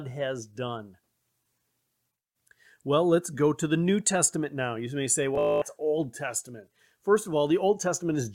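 Bluetooth stutter from 5.35 to 5.62 s: audio packets arrived late or not at all, so the receiver kept replaying its last short buffer. About 243 ms of speech is lost, mostly in one 224 ms run that buzzes mechanically before the sound resumes further along.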